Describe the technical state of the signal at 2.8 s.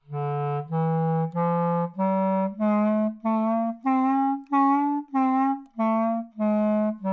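At 2.8 s the audio has a wrong sample rate fault, and it runs through the whole clip. The samples are played back slower than they were captured, with no conversion between the two rates. Speed and pitch therefore drop together. Everything moves at about 0.73 times its proper pace and sits about 5.5 semitones low. The sound is lower and slower. The ratio fits 22 kHz material played at 16 kHz.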